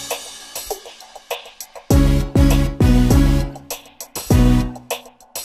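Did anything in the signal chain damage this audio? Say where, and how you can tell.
No, nothing audible points to damage at any stage of the chain.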